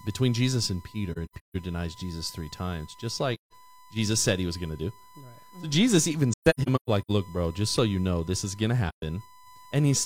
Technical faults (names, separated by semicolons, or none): USB whine; AAC frame loss with muting